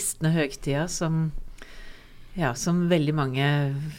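No technical faults can be heard anywhere in the clip. Nothing breaks up, drops out or distorts along the way.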